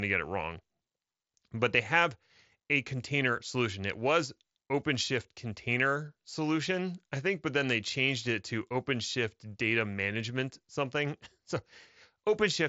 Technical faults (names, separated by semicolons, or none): none